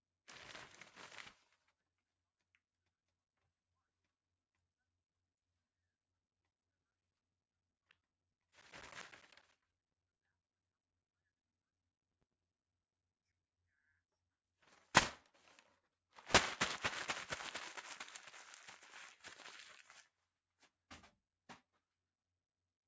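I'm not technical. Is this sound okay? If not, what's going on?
No. Sound cut by the noise suppressor, at 1.58 to 1.99 s and again at 20.03 to 20.29 s: a call's noise-cleaning step mistook parts of these everyday sounds for background noise and turned them down, so they briefly sink and their tails fade away too early.

Periodic USB or driver dropouts, from 6.31 to 13.43 s: every 0.1 s, something in the computer briefly stalled the audio connection, and a sliver of sound, around 10 ms, was replaced by silence. This happens about seventy times and is heard as a steady run of ticks.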